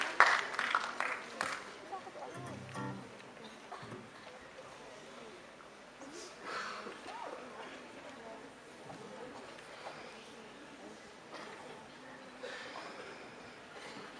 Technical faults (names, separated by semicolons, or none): none